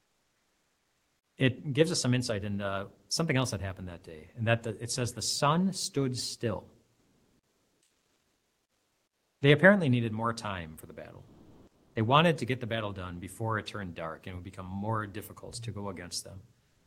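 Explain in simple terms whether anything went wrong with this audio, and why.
The sender likely stopped transmitting during pauses, so the receiver filled them with made-up hiss. This is comfort noise in place of the background, at 0.0–1.33, 7.03–9.37, 11.29–11.95 and 16.69–16.86 s. There the real room sound turns flat and featureless, quieter in the first and last gaps and louder in the middle two.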